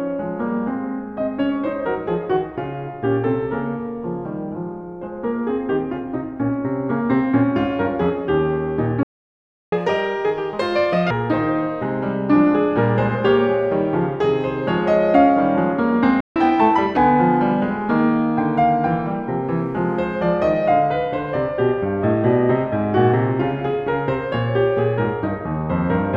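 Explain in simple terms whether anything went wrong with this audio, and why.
The music goes silent twice, a playback stall at 9.03 s for about 0.69 s and at 16.20 s for about 0.15 s, likely because the player ran short of data. It resumes rather than crackling.

Each stall is followed by catch-up at higher speed, from 9.72 to 11.11 s at 1.5 times speed and from 16.36 to 16.97 s at 1.25 times. Tempo and pitch both jump, by roughly seven and four semitones, then settle.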